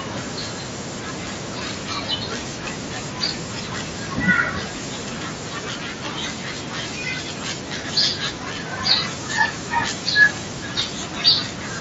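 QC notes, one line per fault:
Nothing to flag here, just speech carried over the usual wideband mSBC Bluetooth headset link, with its top end reaching to about 8 kHz as that path normally allows.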